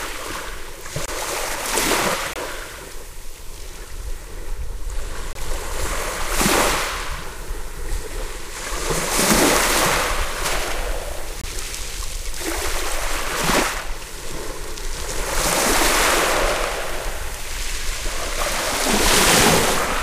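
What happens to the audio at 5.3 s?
A corrupt frame muted dropout runs from 5.33 to 5.37 s, a gap of about 42 ms that fits two consecutive compressed frames being lost. Bit errors damaged those frames, the decoder rejected them, and the player filled their slot with silence. The sound cuts off abruptly into a brief hole and then carries on. Because the missing stretch is replaced rather than skipped, the timing of the sounds stays intact.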